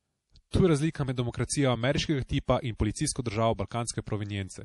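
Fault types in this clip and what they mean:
MP3 compression: Nothing is heard above 11.4 kHz, and the speech has a plainly audible watery, swirly texture. Weak frequency detail seems to flicker in and out. This is likely a starved MP3 encoder, which fits a low bitrate near 48 kbps.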